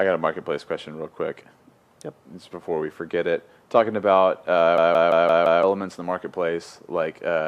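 A system hang loop spans 4.78 to 5.63 s. The machine stalled while the audio hardware kept cycling its ring buffer, so one 0.17 s slice, which fits an 8192-sample buffer, repeats five times at 5.86 Hz as a machine-gun stutter, losing about a second of audio.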